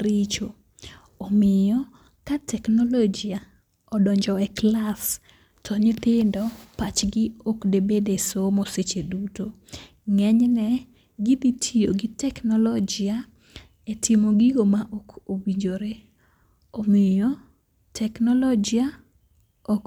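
Nothing here needs flagging: the speech carries on with no technical faults at any point.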